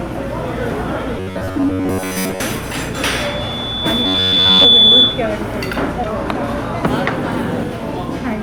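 From 1.18 to 2.40 s the audio turns into a rigid, metallic buzz pitched at 93.8 Hz. That's robotic sound from repeated short buffers, likely caused by new data arriving too slowly, so the playback loops a tiny slice, around 10.7 ms, to fill the gap. Most of the stretch is repeated material rather than fresh audio, so the sound keeps its rough shape but gets a fixed mechanical pitch stamped on it.

At 2.93 s a loudspeaker feedback squeal starts. A single tone at 3.5 kHz swells over roughly a second and a half until it sits about 10 dB above everything else. Some of the speaker output is leaking back into the mic and getting boosted around the loop at that one frequency. It howls on until 5.28 s.

In the middle of the squeal, from 4.06 to 4.65 s, the same 93.8 Hz robotic buzz comes back, so the sound underneath the tone turns metallic again while the squeal carries on.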